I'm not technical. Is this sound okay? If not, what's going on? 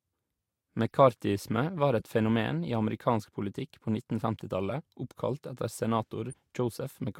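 No. Two corrupt frames were decoded, at 1.99 to 2.02 s, just before "et fenomen i amerikansk", and at 6.31 to 6.34 s, just after "oppkalt etter". The speech is stored as small compressed chunks. In each of these spots, a single chunk was damaged, and the player played it anyway instead of skipping it. The scrambled data puts sound at the wrong pitches, so you hear a brief, fairly quiet blip or chirp lasting about three hundredths of a second.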